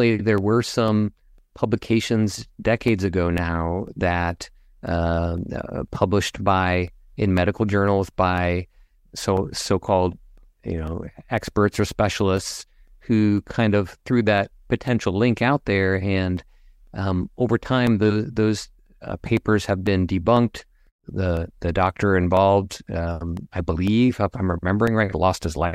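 Periodic USB or driver dropouts run from 0.38 s to 25.37 s, every 0.5 s. At each one, something stalls the audio path and about a millisecond of speech is replaced by silence. This produces a steady train of small ticks that are audible only while speech is present.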